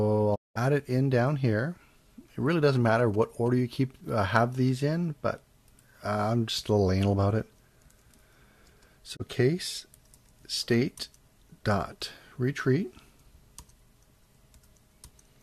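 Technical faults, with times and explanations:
0.34 to 0.57 s, digital broadcast dropout: the sound fades out over about 20 ms and stays silent for roughly 190 ms before coming back. That's the receiver muting because frames stopped arriving intact, and the length fits about eight lost frames of 24 ms each. Whatever was broadcast in that gap is simply gone.
9.15 to 9.21 s, digital broadcast dropout: a much shorter hole of about 24 ms with the same quick fade, which points to a single bad frame being muted.
2.52 to 3.48 s, GSM signalling bursts: for about a second you get that galloping dit-dit-dit of short buzzes, pitched at around 217 Hz and sitting roughly 20 dB under the programme. A nearby 2G phone is sending signalling bursts, and the audio circuitry rectifies the radio pulses, so their repetition rate comes out as an audible buzz.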